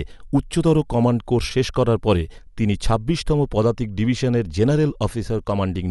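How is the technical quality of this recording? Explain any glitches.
The recording is technically compromised throughout by audible lossy coding. Likely Dolby Digital compression at a low rate, fitting roughly 64 kb/s, strips content above 11.5 kHz and fills starved frequency lines with noise, leaving the speech dull and rough.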